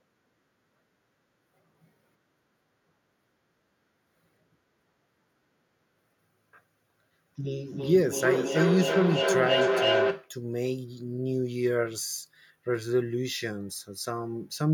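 From 7.38 to 10.38 s there's feedback echo between two devices: speech loops back roughly every third of a second, building to about 1 dB above the original.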